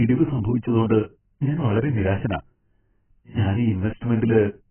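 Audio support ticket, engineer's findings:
Speech dull and band-limited throughout, with nothing above 3.1 kHz. Heavy smearing, warbly fizz on sibilants. Likely AAC compression, AAC-LC at a very low bitrate, around 9 kbps. Encoder cuts the top band and starves remaining spectral lines of bits.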